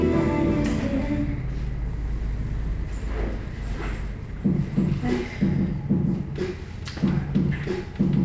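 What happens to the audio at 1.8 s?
Nothing goes wrong at 1.8 s: the audio is intact there, passing through the call path with no dropout, glitch or distortion at that moment.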